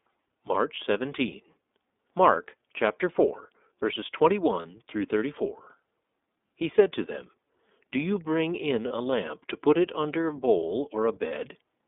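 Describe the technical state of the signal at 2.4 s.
At 2.4 s you're hearing the iLBC codec, and it runs the whole clip. The sound is squeezed into roughly 250 Hz to 3.6 kHz, and the coder rebuilds each 30 ms frame independently, so the speech comes out rough and plainly synthetic, which fits the 13.33 kbps mode.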